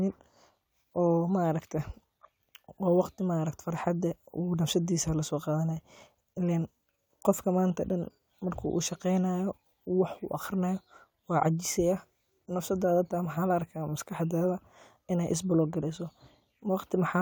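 No technical faults can be heard anywhere in this recording.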